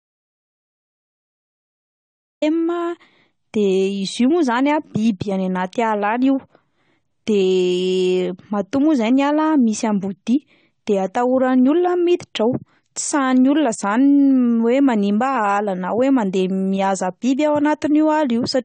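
The input was likely lost at the start, so the speech opens with an audio dropout to silence, dead digital silence with no room tone, until 2.42 s. Throughout, AAC compression likely discarded detail: nothing is heard above 9 kHz, and the plainly audible dull, warbling smear points to a low bitrate around 32 kbps.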